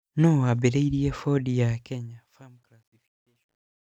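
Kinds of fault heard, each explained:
Truncation distortion on a fade: the fade-out is requantised without dither, fitting an 11-bit stage, so from 2.42 s its tail turns gritty.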